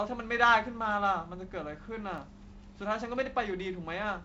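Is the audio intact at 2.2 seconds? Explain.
No. CD scratch ticks run from 1.83 to 2.35 s, covering 2.2 s. A scratch destroys more data per disc turn than error correction can rebuild, so the player conceals the damaged samples, leaving four brief ticks, the longest around a millisecond or two.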